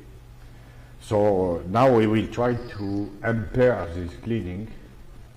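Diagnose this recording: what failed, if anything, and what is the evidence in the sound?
Time-stretched section from 2.37 s to the end. Pace slows to 0.71 times, pitch unchanged, so it drags. Likely editing software repeating short pieces.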